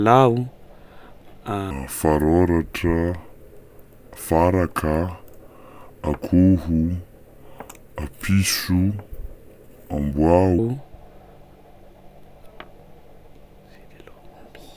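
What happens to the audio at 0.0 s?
At 0.0 s the audio is intact, with no dropout, click, distortion or other fault audible there.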